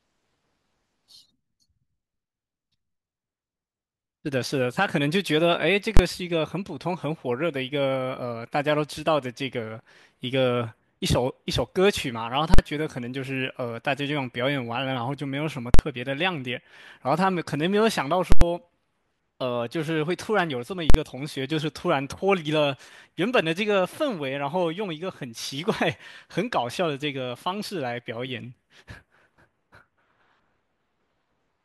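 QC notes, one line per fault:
5.97 to 20.94 s, invalid numbers at full scale: bursts at 5.97, 12.54, 15.74, 18.32 and 20.90 s, lasting 23 to 93 ms. A calculation broke down and the block was pinned at maximum level. The 23 ms one lands as one loud bang. The lengths fit 1024- to 4096-sample blocks.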